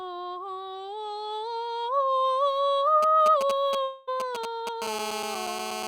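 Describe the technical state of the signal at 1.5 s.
At 1.5 s the music plays through intact, with no dropout, click, distortion or other signal fault at that moment.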